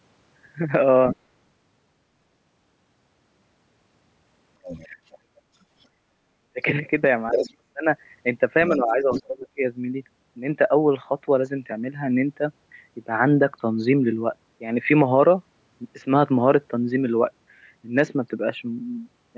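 From 1.1 to 1.16 s and 4.63 to 5.85 s, the other side's voice leaks through. It sits about 10 dB and 20 dB below the speech. Echo cancellation likely left loudspeaker sound in the microphone. At 4.89 to 4.97 s and 6.53 to 6.62 s, the speech is suppressed in double talk, dipping by about 15 dB. From 7.31 to 7.5 s, a louder echo scrap appears. The speech is pushed down by about 35 dB until 7.88 s. From 8.69 to 9.6 s, it dips by about 20 dB, with echo leaking through from 8.73 to 9.23 s.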